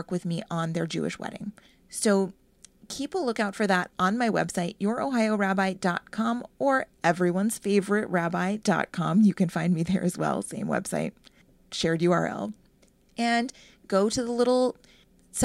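This speech recording has two abrupt jumps where the sound skips forward without any gap: at 4.0 s, between "a lookout for that" and "my website", and at 13.5 s, just before "go to the". Each is likely a dropped buffer (overrun), with roughly 10 and 20 ms of audio lost and the edges spliced together.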